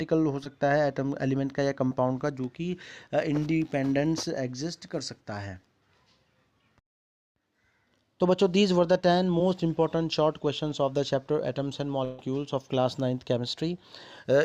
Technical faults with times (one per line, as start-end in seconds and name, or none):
0.44 short concealed packet loss
1.89-1.92 short concealed packet loss
9.39 short concealed packet loss
12.04-12.19 burst of packet loss